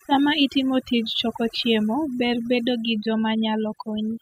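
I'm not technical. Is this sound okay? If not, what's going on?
No. The speech has overdone noise removal from start to finish. A cleanup tool set too aggressively silenced parts of the sound it mistook for background noise, taking the quieter edges of the voice with it. The gaps sound oddly empty with twinkling specks.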